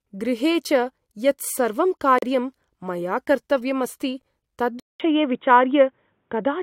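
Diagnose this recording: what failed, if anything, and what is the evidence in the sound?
The stream's segment timestamps failed to line up, so at two boundaries the player had nothing to play and inserted silence. This is a gap between stream segments, a network or streaming-stage fault. Hard-edged holes in the speech appear at 2.18 to 2.22 s, about 39 ms long, and at 4.22 s, a brief dropout of about 8 ms. They fall roughly 2 s apart, matching the segment length. The timeline stretches slightly, but no audio is lost.

At the capture stage, the input was likely switched to a poorer device partway through. At 4.80 s the speech stops for about 200 ms, then returns audibly duller and boxier, with nothing above 3.8 kHz. Its level shifts by roughly 5 dB, and a new background noise sits far below it, around 50 dB down. This narrow band, changed tone and fresh noise floor persist to the end of the clip.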